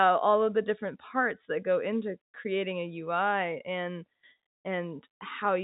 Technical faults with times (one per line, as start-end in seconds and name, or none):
none